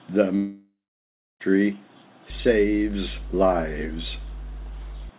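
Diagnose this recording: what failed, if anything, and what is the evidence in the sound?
Network: a likely long network dropout loses about 1.04 s from 0.36 to 1.42 s. A fading buzz or hiss gives way to 0.66 s of silence before speech resumes.

Analogue wiring: power-line coupling adds mains hum, a steady 50 Hz tone well below the speech level, from 2.3 to 5.09 s.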